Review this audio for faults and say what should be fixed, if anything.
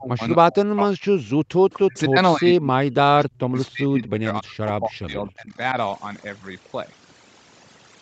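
Overdone noise removal runs through the whole clip. The suppressor pushes single frequency bands far down whenever they sit near its noise estimate. Quiet parts of the speech vanish with them. The background drops and breaks up into twinkling specks. To prevent it, lower the noise reduction strength so it removes less than the full noise estimate.

The speech dips sharply from 0.0 to 0.22 s, 0.5 to 1.35 s, 1.78 to 2.18 s, and 2.35 to 5.77 s. The drops go as deep as about 30 to 40 dB. The last span is the longest. This is likely speech suppressed in double talk. The echo canceller could not tell the near talker from loudspeaker echo while both sides spoke, so it turned everything down. To prevent it, improve the echo canceller's double-talk detection or have the far side use a headset to cut the echo.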